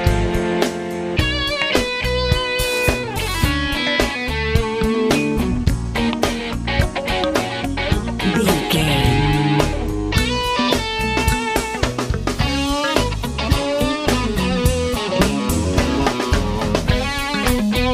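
Nothing technical goes wrong anywhere in this audio; there's no fault to point to or explain.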